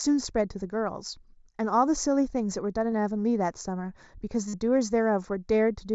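Right from the start there's a hollow, slightly phasey colour on the speech, and it never goes away. That's channel delay, or comb filtering: one channel is running just a few samples late, a fraction of a millisecond, and when the two get summed to mono the shared content cancels at evenly spaced frequencies. The first notch lands around 3 kHz, which takes the presence out and leaves things a bit dull and scooped.

At 2.91 s there's a tiny blip of concealed Bluetooth headset packet loss, only about 15 ms of audio gone. The receiver patched it by repeating the closest-matching bit of the waveform it had just played. The one at 4.48 to 4.54 s is longer, about 50 ms, and the patch is easier to hear: a short buzzy, held tone at full level, then a little warble as the real signal comes back.

All of it sits on top of the mSBC headset codec, which is why the audio tops out at 8 kHz and has that faint grain on the louder bits.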